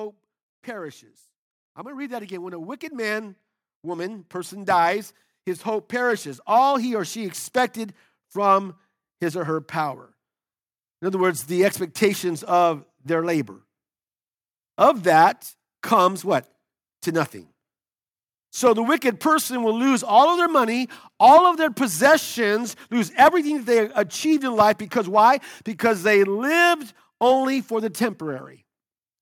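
Automatic gain rising runs from 0.65 s to 12.5 s, ending just before "their labor". The gain control judged the incoming speech too quiet and kept pushing its gain upward, by about 14 dB in total over nearly twelve seconds. Because the boost is applied to the whole signal, the voice and the room noise beneath it swell together, so the background climbs steadily instead of staying put as the level creeps up.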